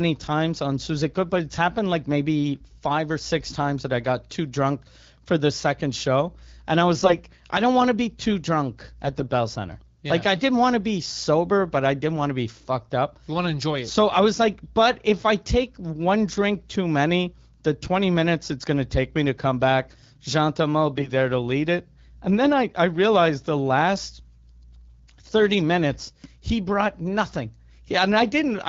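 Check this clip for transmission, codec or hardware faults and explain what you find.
Four short bursts of AMR bit errors turn up in this speech clip. Around them the wideband coding sounds light and clean, consistent with the 12.65 kbit/s AMR-WB mode.

The AMR bit errors fall at 6.96 to 7.18 s; at 9.05 to 9.24 s, after "to be too drunk"; at 17.82 to 17.88 s, between "drink too many the" and "minutes it's going to"; and at 20.96 to 21.10 s, before "to lead it". A few percent of the weakly protected bits were flipped, which misplaces the excitation pulses and skews the fine pitch, gain and spectral values. The voice keeps its rough level and pitch but turns hoarse and gargly. On a spectrogram the harmonics smear into scratchy noise, while the waveform envelope stays largely intact.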